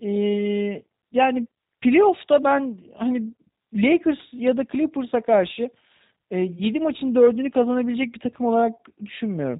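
Speech that has been passed through a G.729 codec (the G.729A variant) for its whole length. The encoder discards the waveform and rebuilds each 10 ms frame from a vocal tract filter, a pitch predictor and a handful of pulses, at a rate that fits 8 kbit/s. Nothing above 4 kHz survives, so the speech sounds band-limited and muffled, and the rebuilt excitation gives it a plainly audible rough, synthetic quality.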